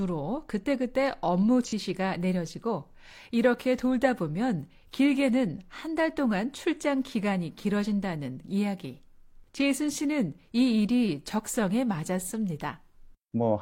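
From 1.65 to 1.73 s, AAC frame loss with concealment refills the gap from the preceding spectrum: a smeared, noisy patch that blurs the spectrogram.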